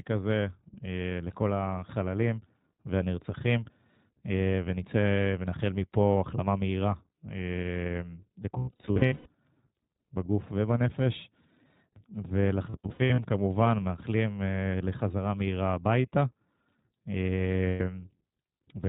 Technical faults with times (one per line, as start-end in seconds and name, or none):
0.00-18.89 iLBC codec
8.58-9.32 lost iLBC frames
12.70-13.20 lost iLBC frames
17.68-17.81 lost iLBC frames